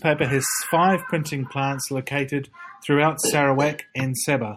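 Repeated frames at 0.49 to 0.59 s, just before "five printing plants located": a 48 ms block of compressed frames, which fits a pair of frames, was decoded twice more, so the speech stutters and runs 96 ms longer.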